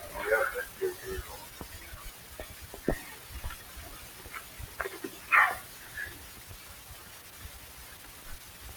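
A noise suppressor meant for speech has been left on across the whole clip. It's mistaking the sustained parts of the sound for noise and pulling them down by around 10 dB, so onsets come through while held material and tails keep sinking and swelling back.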